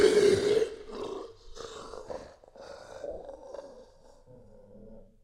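A recording of sounds, with a channel delay (doubling) fault from 1.07 s to the end. From that point every event is heard twice. A second copy follows the first by 40 ms, at the same level. It sounds like a tight doubling or a short slap echo. The cause is one channel running a long buffer behind the other. When the two are summed to mono, the late copy stays separate instead of blending.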